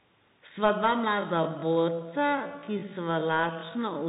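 The whole clip has passed through a Bluetooth CVSD headset codec, a one-bit delta coder whose adaptive step cannot keep up with fast, loud high content. The speech is cut off above 3.8 kHz, sibilants sound scratchy and distorted, and a granular hiss sits underneath, consistent with a 64 kbps link.

From 1.09 s to the end, the pace abruptly drops to 0.6 times normal speed while the pitch stays put. This time-stretched section most likely comes from software repeating short pieces to lengthen the audio, which leaves the speech dragging.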